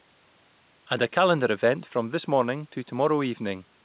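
No technical faults can be heard in this speech, which reaches the listener over a call path whose narrowband coding leaves nothing above 4 kHz, which fits G.711 mu-law at 64 kbps.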